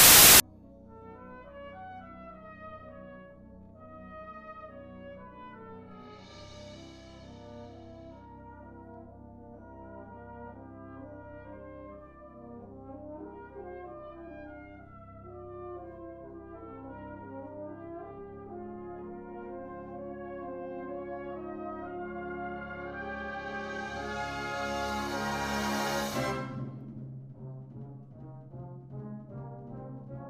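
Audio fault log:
0.00–0.40 s, file tags played as audio: the clip opens with a hard-edged burst of very loud white noise lasting about 0.4 s, because an embedded cover picture, stored as compressed data, is being read out as samples. Compressed bytes are close to random, so they decode as static. On a waveform this shows as a solid, loud block with abrupt edges; on a spectrogram it is a bright, even wash across all frequencies that starts and stops sharply.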